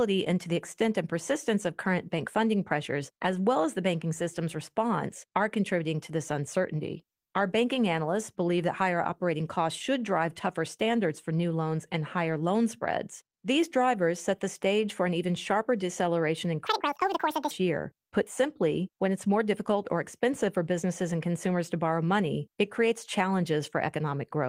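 Speech, with a section at the wrong speed: from 16.67 to 17.51 s, right after "even sharper deceleration in", a playback or editing stage likely ran that stretch against the wrong clock at 1.9 times speed, so the audio turns hurried and jumps roughly ten semitones higher.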